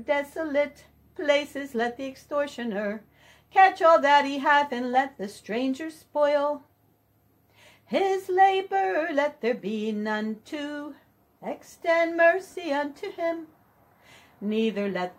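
One fault stands out in this audio: a corrupt frame concealed at 12.5 to 12.55 s. The damage spans about 54 ms. That length fits two damaged AAC frames. Flipped bits broke those frames. The decoder caught the damage and filled the gap itself, muting or reusing the last good spectrum with scrambled signs.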